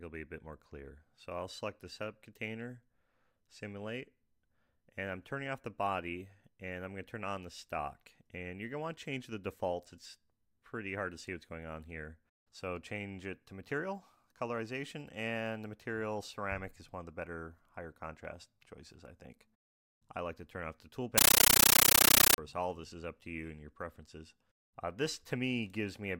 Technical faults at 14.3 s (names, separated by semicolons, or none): none